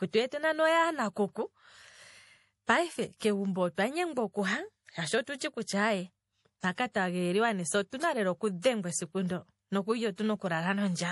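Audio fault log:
Throughout: MP3 compression. The treble stops dead at 11.5 kHz. Weak detail flickers in and out between frames, giving a watery, swirling edge and chirpy s sounds. The cause is likely MP3 coding starved of bits, which fits a rate near 48 kbps.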